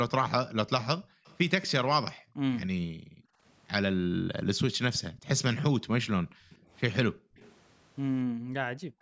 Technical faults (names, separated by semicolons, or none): background gated by the echo canceller; echo leak